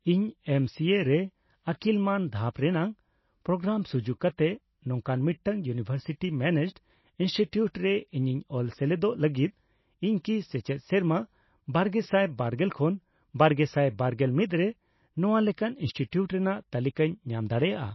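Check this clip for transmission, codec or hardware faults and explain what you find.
One codec fault runs through the whole recording. The speech sounds like it has likely gone through MP3 compression. Nothing is heard above 5.8 kHz. The encoder has cut the treble because bits ran short, which fits a bitrate near 24 kbps. Weak frequency lines drop in and out between frames. The sound is dull, watery and swirly, s sounds carry metallic chirps, and attacks are smeared.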